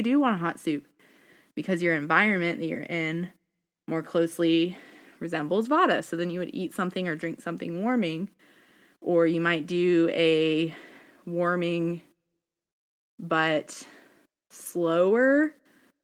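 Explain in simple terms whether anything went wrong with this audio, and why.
Nothing went wrong with this audio, because there is no fault anywhere in the speech to point to.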